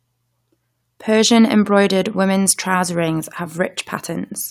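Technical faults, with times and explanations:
Listening to the speech recording brought up nothing that stood out as a technical problem.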